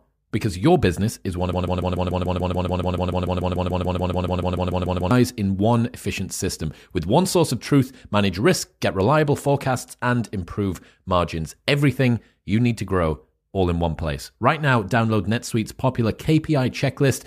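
From 1.53 s to 5.11 s, just after "business is one of", a broken-record loop repeats one 145 ms fragment 25 times back to back as a rapid stutter. This is likely a stalled player or stream resending its last buffer. The audio for that span is lost, and playback resumes at "in one efficient system".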